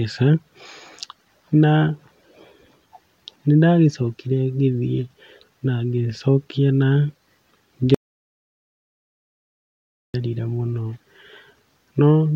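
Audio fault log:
7.95–10.14 s, audio dropout to silence: the speech cuts off mid-flow and about 2.2 seconds of dead digital silence follow, with no room tone at all, before it resumes. Likely the input dropped out while the recorder kept writing silence.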